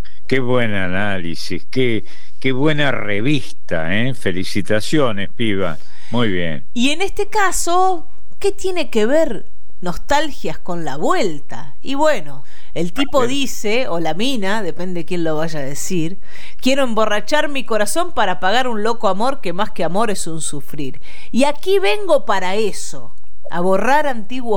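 From start to finish the speech carries a DC offset of about -13 dBFS. The whole waveform sits shifted off the zero line by a constant amount, so it rides visibly above or below centre on a waveform display and clips sooner on one side, wasting headroom. The offset itself is inaudible, but a spectrogram shows it as a steady band of energy pinned at 0 Hz, unbroken across the full duration.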